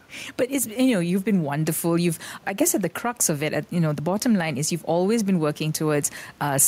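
All the way through this speech clip there's gain pumping: the level swings by around 5 dB, ducking whenever the talker gets loud, and the room noise sits about 36 dB below the speech. That's likely the input gain being set way too hot, with a fast limiter clamping down on every peak.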